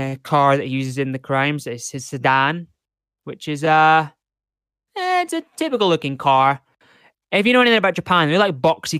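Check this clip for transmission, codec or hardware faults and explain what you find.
No transmission, codec or hardware faults turn up in this clip.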